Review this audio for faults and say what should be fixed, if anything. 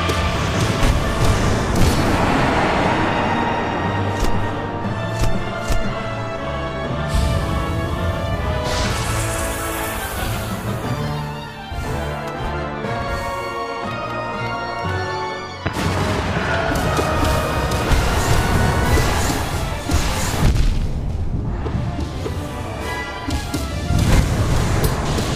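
Chunks out of order at 0.36–0.54 s and 12.96–13.08 s: a 60 ms chunk plays late, two chunks behind its place in the first event and one behind in the second, leaving a brief jumbled moment with three hard joins. Unlike a dropout or a repeated chunk, nothing is missing or doubled; the same audio is simply shuffled. Reorder chunks by sequence number or timestamp before writing or playback.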